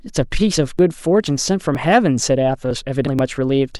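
Starting at 0.31 s, short skips come at regular spacing, at 0.31, 0.79, 1.27, 1.75, 2.23 and 2.71 s. That's audio missing between chunks, likely from half-second processing blocks dropping around 20 ms at each handover and butting the edges together, so each one lands as a small jump.

At 3.06 s there's a bigger jump forward, roughly 150 ms gone. That's compressed frames skipped. With 26.1 ms frames, that gap points to about five frames either missing or rejected by the decoder as damaged.

The regular chunk skip comes back once more at 3.19 s.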